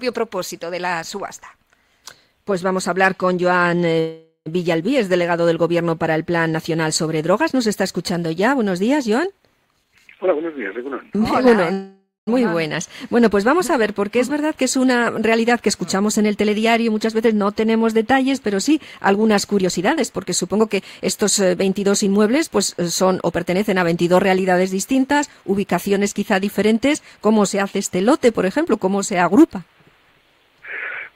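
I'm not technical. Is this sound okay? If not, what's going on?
No, there are two kinds of problem. At 3.99 and 11.73 s there's a call audio freeze: the sound stalls for about half a second, trailing off into a fading buzz, likely because the connection held up the audio for a moment. Then there are three jitter buffer speed-ups, at 9.65 to 11.72 s (about 17% faster), 15.43 to 17.32 s (8%) and 19.59 to 23.74 s (12%). The call squeezes out tiny slices to catch up, so it sounds rushed but keeps its pitch.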